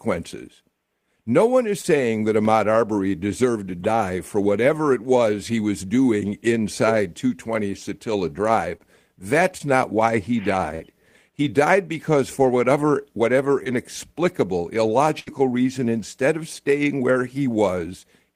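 Around 1.81, 8.77 and 9.58 s you get short concealed packet loss, where about 20 ms went missing and the decoder patched it by extending the last sound. Each shows up as a quick smear or wobble. At 10.75 to 10.82 s there's a burst of packet loss. About 40 ms dropped out, and the fill turns into a brief held buzz or fading hiss before the audio picks up further on. Another short concealed loss at 13.64 s gives the same little smear. Then a longer burst at 15.19 to 15.41 s loses about 60 ms, and you can hear the gap skip forward.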